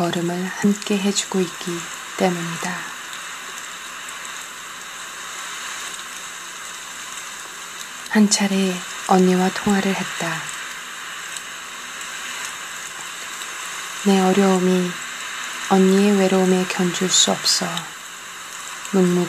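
At 0.63 s and 12.08 s, compressed frames are skipped. The decoder drops whole frames, so the audio jumps ahead, by about two frames (around 50 ms) and then about one. The steps fit a 23.2 ms frame.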